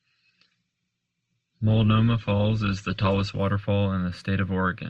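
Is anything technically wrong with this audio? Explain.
Yes. From 0 to 3.4 s this is an adaptive stream starting at a low bitrate. The player began on a cheap version of the stream so playback could start at once, then switched up after gauging the connection. Until the switch, nothing is present above 8.2 kHz, which fits a stream of around 16 kbit/s Opus. The speech sounds band-limited and smeared. Quality then jumps abruptly to a fuller, cleaner sound with no gap, consistent with roughly 64 kbit/s.

From 3.56 s to the end, de-emphasis has been applied wrongly. A treble-reducing filter meant to reverse a pre-emphasis boost was run on audio that never had that boost, or ran a second time. Nothing restores the lost top end, so the response falls steadily toward high frequencies and sits about 11 dB lower at 10 kHz than at 1 kHz. The speech turns dull and muffled, with softened consonants.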